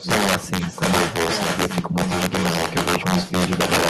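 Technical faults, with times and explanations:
Throughout, integer overflow: the loudest moments of the speech break into violent, snapping cracks, far harsher than ordinary clipping. The signal was driven about 10 dB past the largest value the integer format can hold, and instead of being limited at the ceiling, each overshooting sample wrapped round to the opposite extreme. Only a few percent of samples go over, but each one jumps across the full range, producing a sharp crack on every peak.
Throughout, echo leak: a second copy of the speech trails the original by about 1.17 s, only a little quieter than the direct sound, so it competes with it rather than sitting in the background. The likely cause is a far end playing the call on a loudspeaker, where the echo canceller failed to remove what its microphone picked up from that speaker. The leftover was sent back down the line as this delayed repeat.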